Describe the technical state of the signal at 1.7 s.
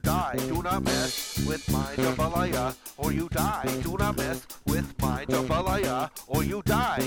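At 1.7 s the signal is intact, with no dropout, distortion, clipping or other fault audible at that point.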